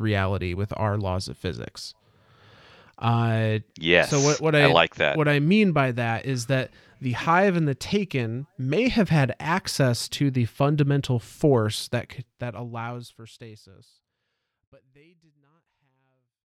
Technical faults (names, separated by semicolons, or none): none